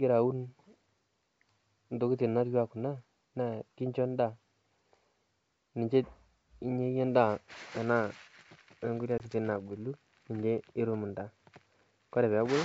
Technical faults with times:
9.18-9.22 packet loss on an ADPCM call

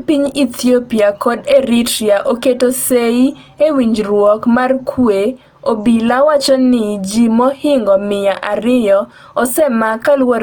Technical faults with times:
0.00-10.43 Opus compression

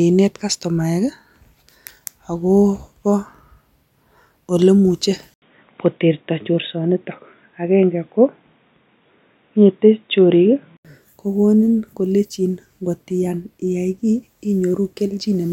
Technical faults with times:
5.34-10.85 input switched to a poorer device

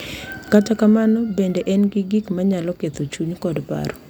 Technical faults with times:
0.47-3.55 clock drift buffer slips

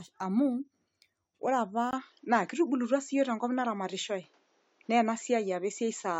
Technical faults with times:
1.91-6.19 input switched to a poorer device

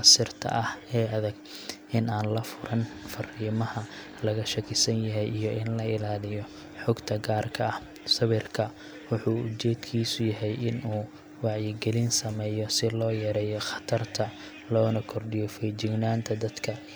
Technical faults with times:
none

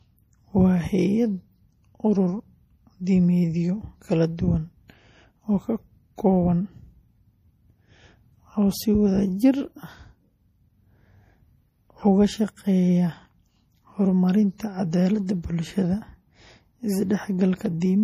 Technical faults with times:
0.00-18.03 MP3 compression
15.61-17.66 periodic USB or driver dropouts

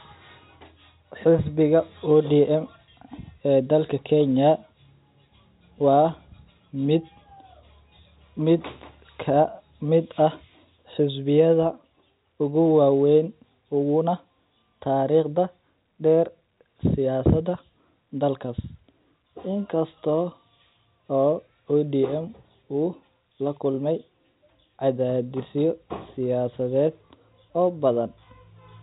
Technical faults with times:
none

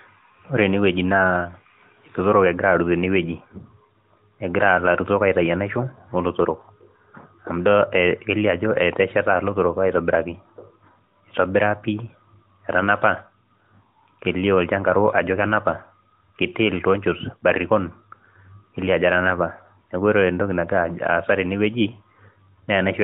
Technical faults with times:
none

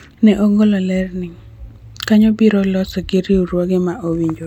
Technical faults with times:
none

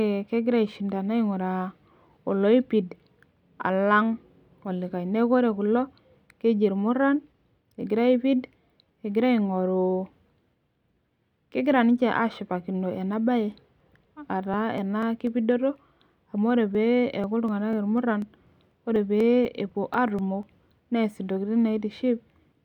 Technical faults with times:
13.31-20.68 periodic USB or driver dropouts

